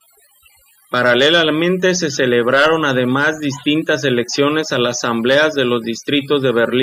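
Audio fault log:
Throughout: overdone noise removal. A noise reduction stage set too aggressively pulls individual frequency bands down or out whenever they sit close to its noise estimate, so the pauses fall to near silence scattered with twinkling, chirpy specks, and softer parts of the speech are stripped away with the noise. Unlike a noise gate, which mutes everything at once, here separate bands flicker on and off independently, giving that sparkling residue.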